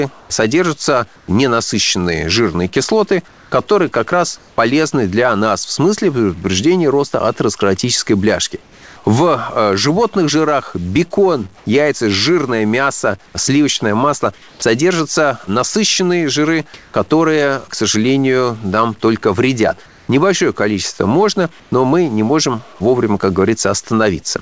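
Speech with distortion throughout, and hiss in the pauses, which a stuck bit in the data path likely causes. The bit pushes about half the sample values off by a fixed amount, and in quiet gaps it flips with the signal's sign. The pauses at 0.20–4.58 s, 8.62–8.96 s (after "предупреждения роста атеросклеротической бляшки", about 3 dB quieter), 11.58–14.62 s (after "животных жирах бекон"), 16.74–16.94 s (about 3 dB louder) and 19.86–21.72 s (between "сожалению нам только вредят" and "но мы не можем") show comfort noise in place of the background. The natural background drops out for a flat, featureless hiss, as when discontinuous transmission stops sending in silence. At 14.59 s the next sound starts abruptly, its first 30 ms missing. This is likely an onset clipped by the voice detector, which was slow to reopen. Nothing above 8 kHz is present, consistent with a wideband G.722-style call codec.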